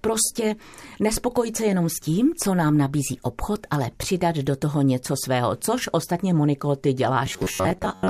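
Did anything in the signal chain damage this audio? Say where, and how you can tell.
Yes: robotic sound from repeated short buffers, 7.26 s to the end. A rigid 94 Hz buzz, about half the audio recycled, likely a starved driver buffer. Unlike clipping, the buzz rate stays fixed.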